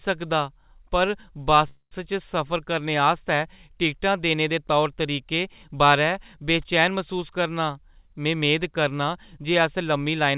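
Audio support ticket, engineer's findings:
Call audio freeze, 1.68 to 1.94 s. Sound stretches into a fading buzz or hiss, then 60 ms of silence, then resumes where it left off. Likely cause: delayed packets emptied the jitter buffer. Receiver filled about 232 ms with concealment. No audio lost. Playout delay grew by the same 232 ms.

Jitter buffer speed-up, 7.69 to 10.29 s. Audio runs at 108% speed with pitch unchanged and sounds hurried. The buffer was holding more than its target delay. The receiver cut short pitch-period pieces repeatedly, roughly a fifth of a second in total. Band edge at 4 kHz throughout fits a G.711 mu-law call path.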